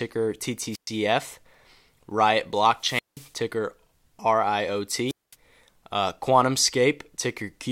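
Speech, with three wireless microphone squelch dropouts at 0.71–0.89 s, 2.79–3.32 s and 5.07–5.35 s. Each time the FM radio link fades and the receiver's squelch mutes the output. That leaves holes of near silence of roughly 118, 180 and 215 ms.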